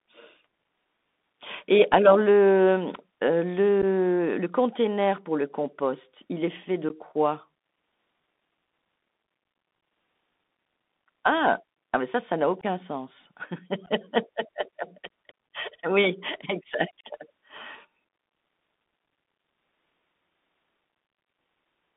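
Throughout, the speech passes through the Bluetooth CVSD headset codec, a one-bit delta modulator whose adaptive step cannot keep pace with loud high-frequency content. Sibilants turn scratchy over a granular hiss, and the band spans only about 200 Hz to 3.7 kHz, consistent with a 64 kbps CVSD link.

Unconcealed Bluetooth headset packet loss opens holes at 3.82–3.84 s, 6.89–6.91 s, 9.81 s, 12.61–12.65 s and 13.86–13.88 s. Each time a few packets, about 11.2 or 15 ms of audio, are dropped with nothing filled in. This leaves abrupt-edged gaps followed by a brief drop in level.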